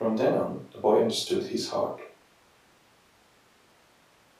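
No technical faults are audible anywhere in the speech. There is nothing at any moment that would call for a timestamp.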